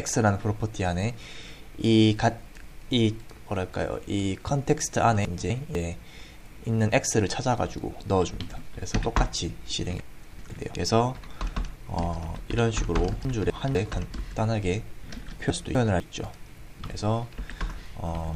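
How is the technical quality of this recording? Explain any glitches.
The recording has chunks out of order, at 5.25 to 5.75 s, 10.0 to 10.75 s, 13.25 to 13.75 s and 15.5 to 16.0 s. A 250 ms chunk plays one chunk late, or two at 10.0 s. Nothing is lost, but each spot sounds jumbled. Each has three hard joins.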